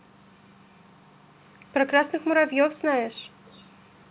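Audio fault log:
3.44–3.70 s, echo leak: a faint, delayed copy of the speech trails the original by 235 ms, sitting roughly 30 dB below it and sounding as thin as the rest of the telephone-band audio, which carries nothing above 4 kHz. The likely cause is a loudspeaker at the other end feeding sound back into its own microphone, where the echo canceller left a small residue that was sent back down the call.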